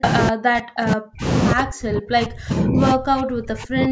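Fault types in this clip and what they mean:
Speech suppressed in double talk: the speech sinks steeply, around 40 dB, in brief and long stretches, likely an echo canceller ducking both sides at once, not a network dropout.
Echo leak: a distinct copy returns 153 ms late at roughly equal level, likely loudspeaker pickup getting past the canceller, unlike reverberation's smooth, diffuse decay.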